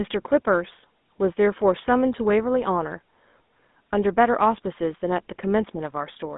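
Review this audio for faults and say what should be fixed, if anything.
The speech has a buzzy, gravelly roughness and a dull, muffled top from start to finish, with nothing above 3.8 kHz and a narrow 200 Hz to 3.6 kHz telephone band. This points to the GSM full-rate codec, around 13 kbps. It rebuilds the voice from a vocal-tract model driven by sparse, regularly spaced pulses, which produces the grainy texture. To prevent it, capture or route the audio over a wideband path instead of a GSM voice channel.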